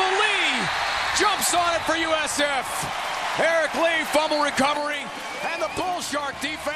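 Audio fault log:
4.77 to 6.75 s, sudden gain jump: the level drops by about 6 dB from one sample to the next and stays there to the end, sound and background noise falling together, likely from a gain change or one-bit shift applied without a ramp.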